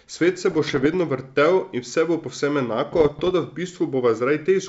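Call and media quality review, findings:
Bit errors on an ADPCM link (G.722 wideband leg): pops, rough bursts, brief level jumps at 0.51–0.94 s and 2.92–3.31 s, second burst denser. Flipped bits corrupt the decoder's step size and predictor, so each error rings for milliseconds. Error rate roughly 0.4% and 0.7%.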